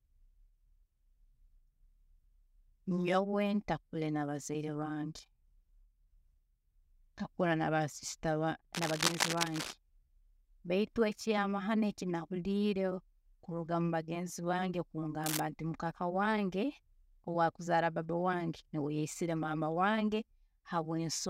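At 8.74 s a burst of cable scratch noise starts and runs for about a second, to 9.75 s: a dense, uneven scratching and rustling sitting right on top of the speech at about the same loudness. It comes back briefly from 15.24 to 15.40 s, just after "kuruga mubagenzi bange", a little quieter this time. That's likely a worn cable or connector being moved, its contact resistance jumping around and spraying noise into the signal.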